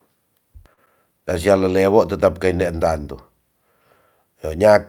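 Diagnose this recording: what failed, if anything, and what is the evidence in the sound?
Network stage: a short stall from a late packet at 0.73 to 0.79 s. The jitter buffer ran dry, so the receiver stretched the last speech sound by about 39 ms until the packet arrived, then resumed without loss. A spectrogram shows frozen, flattened harmonics, and the waveform shows a repeated segment.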